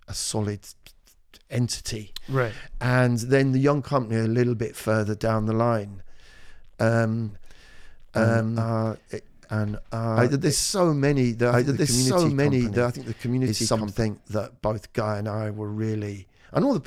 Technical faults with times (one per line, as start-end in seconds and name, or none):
7.29-14.01 doubled audio track